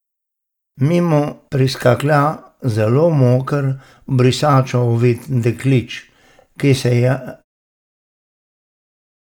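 There are no technical faults in this speech clip; the level eases out with a smooth fade near the end, around 7.5 s.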